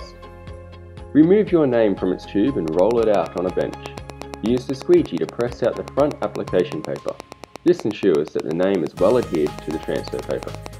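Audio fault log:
2.68–10.67 s, train of clicks: a steady ticking of roughly 70 near-identical pulses at about 8.4 per second, evenly spaced and sitting well above the programme, around 10 dB hotter at their peaks. It's likely interference from nearby gear or a faulty connection or power supply.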